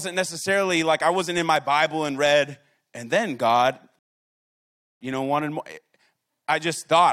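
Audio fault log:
3.99 to 5.01 s, rebuffering stall: the speech drops to silence for about a second, roughly 1.02 s, while the player waits for more downloaded audio, then picks up again at "you know wanted more" exactly where it left off. What sets it apart from a dropout or packet loss is that no material goes missing. The speech continues across the gap, and the pause only adds time to the clip rather than skipping anything.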